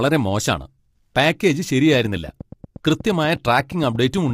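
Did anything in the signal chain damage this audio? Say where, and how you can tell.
Yes. Throughout the speech the tone is rough and grainy, with a hiss-like fill between the voice harmonics and a top band that sounds lowered and synthetic. That texture is typical of low-delay AAC compression, likely AAC-ELD at a low rate around 32 kbps, in the codec stage. Its short frames resolve pitch poorly, so on a spectrogram the harmonic lines look smeared, noise fills the gaps between them, and the upper band looks patchy and replicated.

A train of clicks starts right after "മോശാണ് പാക്കേജ്" at 1.94 s and runs to 4.31 s. There are about twenty sharp ticks at a steady 8.5 per second, with peaks roughly as loud as the speech, and they continue through the pauses. The waveform shows evenly spaced, near-identical spikes, and the spectrogram shows thin full-height vertical lines. This points to the analogue wiring or converter stage, with interference from nearby equipment or a faulty connection or power supply as the likely source.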